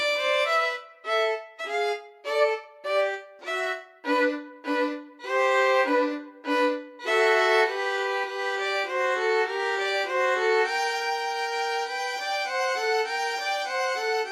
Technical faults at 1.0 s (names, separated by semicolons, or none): none